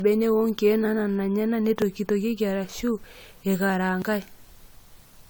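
Throughout, the speech sounds swirly, hollow and smeared, with consonant attacks blurred more than 96 kbit/s AAC-LC alone would explain. This is generation loss, likely from around five rounds of decoding and re-encoding, each adding fresh quantisation noise and spectral holes.

At 1.82 s, just after "wonkiek naanana enyanak", and again at 4.02 s, the speech makes an abrupt jump with no gap of silence. These are dropped buffers from an overrun, likely where the hardware overwrote samples before they were read, removing roughly 20 ms and 30 ms respectively.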